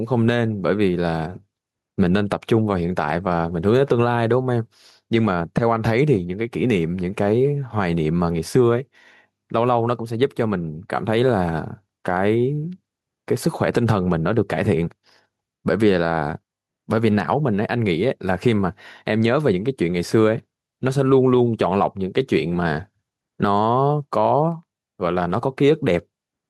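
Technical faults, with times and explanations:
Throughout, gain pumping: the level keeps being pulled down on each louder stretch of speech, with a swing of about 5 dB. The likely cause is the input gain set far too high, so a fast limiter or compressor keeps clamping down, leaving the speech squashed and flat in level.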